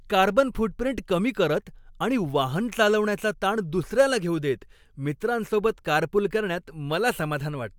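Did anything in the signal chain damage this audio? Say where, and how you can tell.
No, nothing in the chain damaged this speech.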